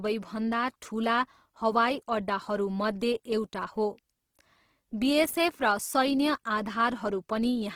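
Throughout, the speech sounds grainy and rough, with noisy texture in the tones. Likely Opus compression at a low bitrate, about 16 kbps, with bandwidth still reaching 20.2 kHz.

From 5.25 to 5.37 s, a short irregular burst of loose connector crackle appears. A dirty or worn contact chops the signal, producing scratchy crackle.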